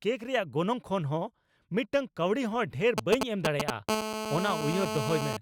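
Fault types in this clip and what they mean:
GSM signalling bursts: a nearby 2G phone's intermittent radio bursts, rectified by the audio circuit, give a galloping run of short 217 Hz buzzes, roughly 5 dB above the speech.
GSM phone buzz: continuous 217 Hz transmission bursts from an active call, rectified into a hard, raspy, harmonic-rich buzz about 3 dB below the speech, from 3.89 s to 5.37 s.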